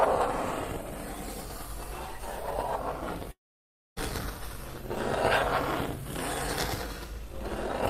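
At 3.31 s the sound breaks off and does not return until 3.98 s. The last sound carries on briefly as a fading tail, then gives way to about 0.61 s of silence, and when the audio resumes, roughly 0.66 s of material is simply gone. That pattern points to a long network dropout as the likely cause. Unlike a short packet loss, the gap is far too long to be bridged, and nothing is replayed or stretched to cover it.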